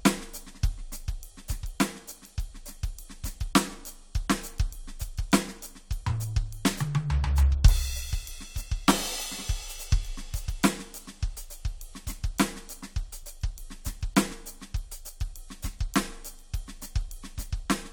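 There are no technical faults to describe at any point in this music.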